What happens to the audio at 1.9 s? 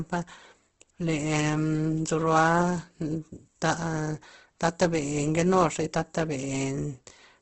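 At 1.9 s you're hearing the Opus compression that runs through the whole clip: likely a starved CELT encoder filling bands with noise, leaving grainy, rough speech cut off above 8.2 kHz.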